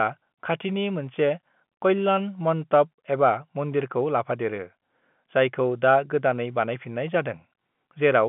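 No technical faults occur at any point in the speech, so there is nothing to describe in time order; the audio simply carries the narrow telephone band of G.711 coding.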